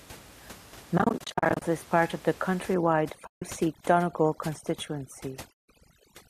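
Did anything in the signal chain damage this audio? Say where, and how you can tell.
Yes. Dropped AAC frames with muting, at the network into the codec: soft fade-outs scattered over 0.98–1.62 s, ending before "is part of the", then 3.27–3.42 s and 5.53–5.68 s.

Overdone noise removal in the call processing, from 2.74 s, right after "is part of the", to the end: a lowered, twinkly background from bands being gated out.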